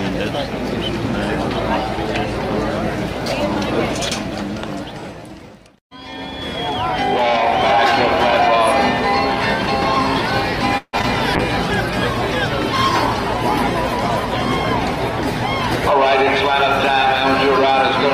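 At 10.77 s the audio stalls for about 0.18 s. The last sound is carried on and dies away, leaving about 60 ms of silence, then the audio resumes where it stopped. This is a call audio freeze, likely packets held up in transit until the jitter buffer ran empty. About 156 ms of filler was inserted and nothing was lost, so everything after it runs that much later.

Right after, two short concealed packet losses follow back to back, at 10.99 s and 11.02 s, each losing 20 ms of audio. The receiver extended the preceding sound to cover the holes and then blended back in, heard as a brief smear or wobble.

From 11.36 s a call bitrate drop takes the encoder from 64 kbps down to 20 kbps. With far fewer bits the coding becomes coarser, and the sound turns rough, watery or muffled. It stays at 20 kbps for the final 5.8 s without recovering.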